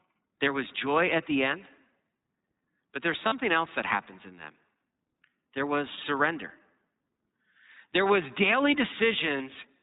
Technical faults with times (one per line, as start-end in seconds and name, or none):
0.00-9.83 iLBC codec
3.27-3.33 lost iLBC frames
5.96-5.99 lost iLBC frames
9.38-9.41 lost iLBC frames